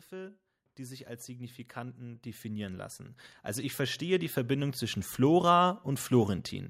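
From 0.09 s to 5.09 s the automatic gain control, having judged the incoming level too low, keeps pushing its gain upward, climbing by about 17 dB over those five seconds. This automatic gain rising makes the speech grow steadily louder and closer, and the background underneath swells right along with it, so the whole sound seems to creep forward rather than the talker simply speaking up.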